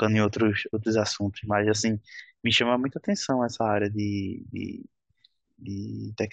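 No technical faults can be heard anywhere in the speech.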